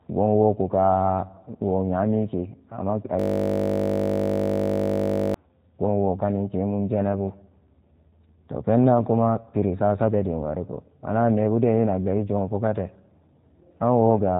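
G.729 codec damage runs throughout: the 8 kbit/s coder rebuilds speech from a filter, pitch predictor and sparse pulses, cutting everything above 3.8 kHz and leaving a plainly rough, synthetic edge. A system hang loop from 3.20 to 5.34 s replays one 20 ms piece of audio over and over as the hardware cycles its buffer, producing a steady 50 Hz buzz.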